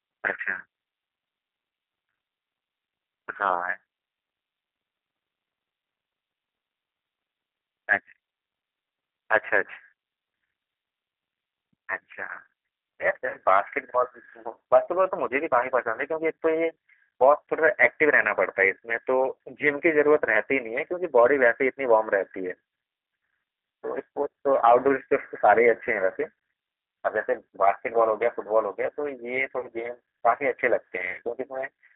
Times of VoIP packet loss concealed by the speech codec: 13.28-13.38, 29.59-29.68, 31.11-31.22

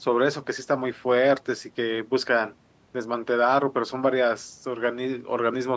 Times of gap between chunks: none

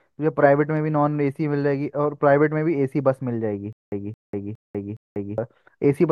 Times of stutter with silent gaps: 3.73-5.38

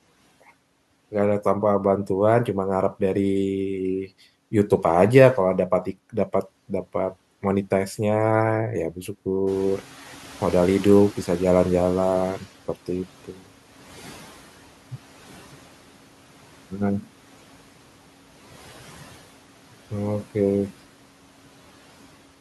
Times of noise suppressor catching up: 9.46-12.49

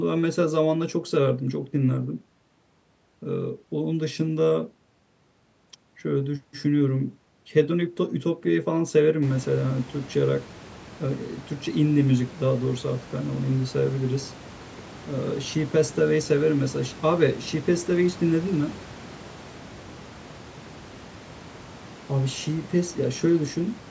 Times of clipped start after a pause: none

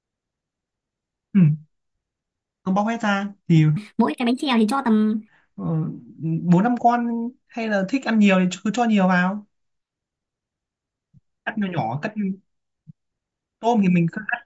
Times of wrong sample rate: 3.77-5.28

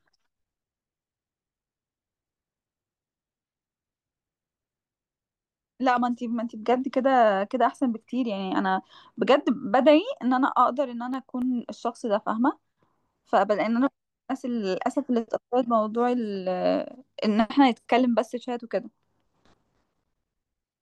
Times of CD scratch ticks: 11.00-11.42

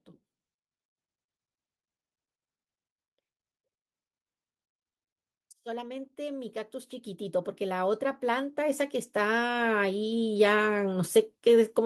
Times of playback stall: none

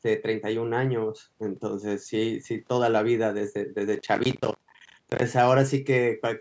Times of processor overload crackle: 3.95-5.22

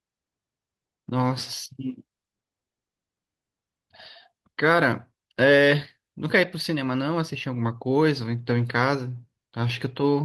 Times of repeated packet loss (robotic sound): none

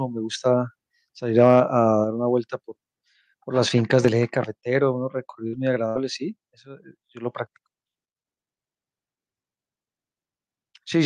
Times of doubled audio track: none

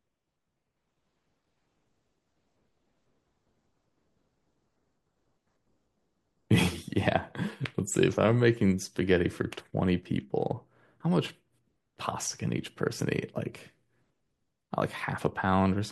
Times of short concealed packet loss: none

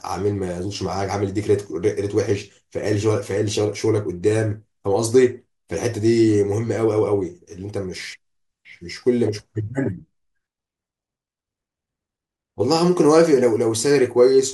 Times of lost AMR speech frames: none

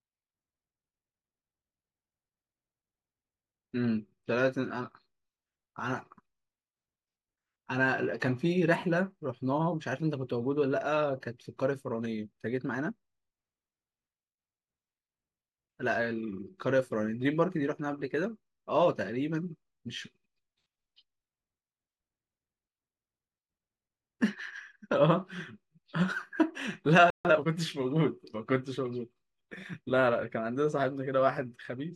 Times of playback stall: 27.10-27.25

